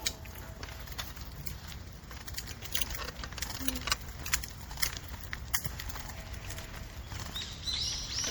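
MP3 compression damage is plainly audible throughout this recording of sounds: a watery swirl as weak components flicker between frames, and smeared attacks, likely from encoding at around 64 kbps.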